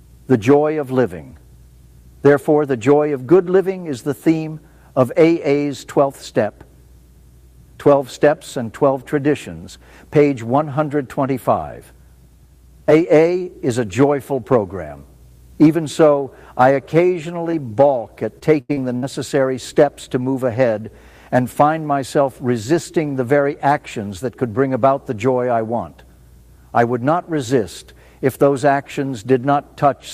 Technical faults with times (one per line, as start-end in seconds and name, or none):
17.51-17.55 short concealed packet loss
18.39-19.04 repeated packet loss (robotic sound)